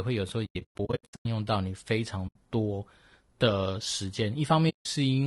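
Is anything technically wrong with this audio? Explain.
Yes. Throughout, the speech sounds rough and grainy, likely from low-delay AAC compression at 32 kbps. Its low bitrate leaves noise between harmonics, so a spectrogram shows noise between harmonic lines and a thin, synthetic top band.

AAC frame loss with muting occurs at 0.45 to 1.26 s, 2.27 to 2.36 s, and 4.69 to 4.86 s. In the first span, about 580 ms of sound is lost in scattered holes over 0.8 s, the longest around a tenth of a second. The later gaps last 80 ms and 160 ms. The decoder zeroed the lost frames, and the overlapping windows taper their edges. The waveform shows soft-edged silent gaps, and the spectrogram shows blank vertical strips.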